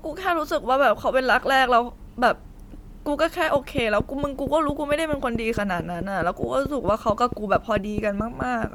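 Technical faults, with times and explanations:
Throughout: Bluetooth LC3 compression, likely. The speech carries a plainly audible grainy, breathy edge, which fits 48 kbps coded in 10 ms frames.
3.56 to 8.65 s: train of clicks. About twenty evenly spaced ticks at 4.5 per second sit about 15 dB above the speech, likely from electrical interference.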